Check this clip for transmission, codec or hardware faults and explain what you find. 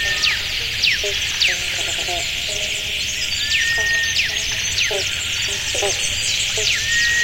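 No transmission, codec or hardware problems can be heard anywhere in the audio, and the signal holds steady throughout.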